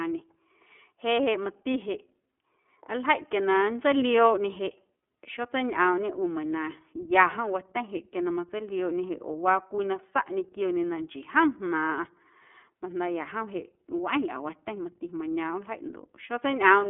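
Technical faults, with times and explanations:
Throughout: iLBC codec, narrowband speech capped near 3.7 kHz, sounding rough and synthetic from independently coded 30 ms frames at a rate that fits 13.33 kbps; spectrogram shows empty space above that line.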